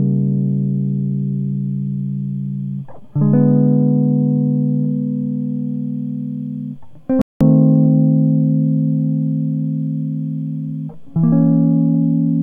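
A digital broadcast dropout hits the music from 7.22 to 7.41 s: the receiver stopped getting usable frames and muted, leaving a clean hole of about 0.2 s, which fits roughly six lost frames. That stretch of the programme is simply missing before sound resumes.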